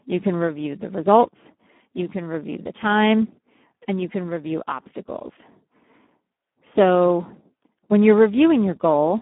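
From start to finish the speech carries heavy Speex codec damage. The excitation is starved of bits, so voicing turns hoarse and buzzy, which points to a low setting of around 8 kbps. The band sits between roughly 200 Hz and 3.4 kHz, with nothing above 3.8 kHz. Plain telephone band-limiting would sound muffled yet clean. Here the hoarse, noisy grain inside the band marks a low-bitrate CELP coder.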